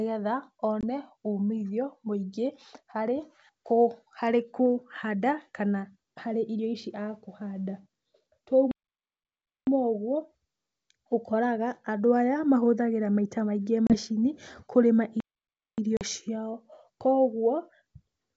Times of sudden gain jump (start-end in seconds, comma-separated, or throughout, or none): none